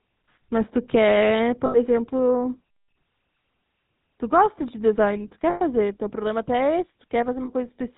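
The speech has a buzzy, gravelly roughness from start to finish, with nothing above 4 kHz. This is the GSM full-rate codec at work, consistent with its 13 kbps rate: it rebuilds the voice from a vocal-tract model excited by sparse, regularly spaced pulses.

At 1.66 to 1.78 s, 5.50 to 5.60 s, and 7.44 to 7.49 s, the sound briefly freezes into a rough, metallic ring. These are lost GSM frames, about 80, 100 and 40 ms long. The decoder repeats the last good frame to fill each gap.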